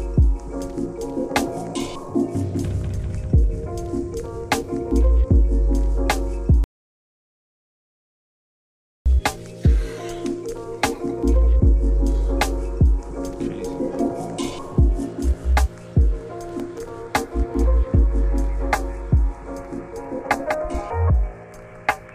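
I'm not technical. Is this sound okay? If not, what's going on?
No. From 6.64 to 9.06 s there is an audio dropout to silence: about 2.4 seconds of total silence, likely from a lost input connection. At 16.53 to 16.88 s, processor overload crackle adds a gritty burst made of many tiny silent gaps, which fits the computer missing roughly ten very short audio deadlines.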